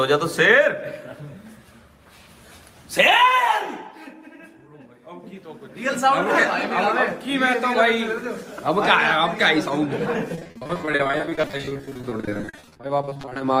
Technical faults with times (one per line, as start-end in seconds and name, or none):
10.35-13.41 repeated packet loss (robotic sound)